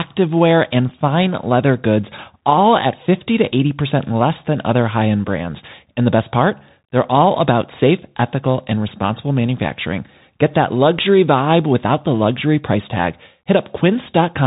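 Throughout, a Bluetooth CVSD headset codec tracks the speech one bit per sample, cutting everything above 3.8 kHz and leaving scratchy sibilants over granular hiss.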